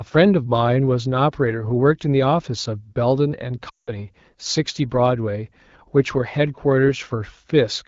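From 3.69 to 3.91 s there are lost AMR speech frames. About 180 ms is missing, which fits nine 20 ms frames. The wideband decoder reuses the last pitch and vocal tract settings at falling gain. Unlike a hard dropout, the sound fades to near silence within two frames rather than cutting, then returns weak or rough.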